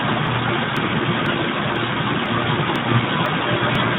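From the start, the speech carries Speex codec damage. It is plainly audible: hoarse and noisy. The codec has too few bits for the excitation, which fits a bitrate near 11 kbps. Nothing is heard above 3.8 kHz.

From 0.27 s to 3.75 s come periodic USB or driver dropouts. One arrives every 0.5 s. Each time, a stalled bus or driver skips about 2 ms of audio. Nothing fills the gap. The result is a regular tick, heard only while sound is present.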